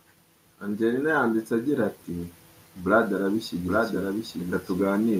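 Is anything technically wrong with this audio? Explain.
Yes, there are two faults. From 0.79 to 2.38 s there is automatic gain rising. The gain control judged the input too quiet and raised it by 4 dB. Voice and background swell together.

From 3.13 s to the end there is a doubled audio track. A somewhat quieter full-band copy trails by roughly 0.7 s. It starts abruptly and has no room colour. It is likely a second, slower capture of the same audio.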